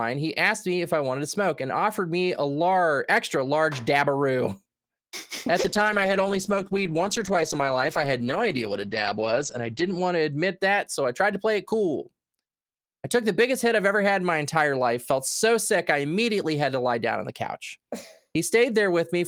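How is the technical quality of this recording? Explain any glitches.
One glitch degrades the speech: a call bitrate drop from 5.6 to 10.63 s. The encoder fell from 32 to 11 kbps for about 4.4 s, coding coarsely and cutting bandwidth from 20 kHz to 8 kHz, so speech turns muffled and watery. A spectrogram shows everything above 8 kHz vanishing.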